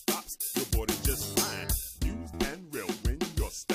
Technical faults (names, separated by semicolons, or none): pre-emphasis left on; damaged data in a compressed stream